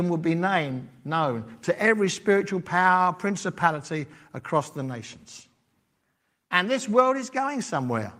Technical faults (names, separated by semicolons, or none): none